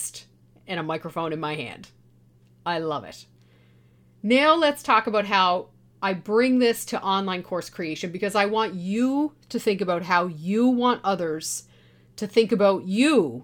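A speech recording with no technical faults to point to. There is nothing here that calls for a time or a cause.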